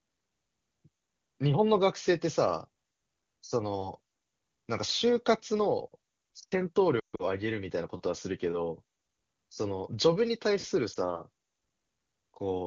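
From 6.99 to 7.24 s the speech breaks up with lost AMR speech frames: most of 0.2 s of frames failed, with the longest gap about 0.14 s. The decoder repeats the last pitch and spectral shape at falling gain, so the sound smears, fades quickly, and returns rough. At 10.93 s a single lost frame gives a brief dip. The AMR wideband (HD Voice) coding is clear, which fits a high rate near 23.85 kbit/s.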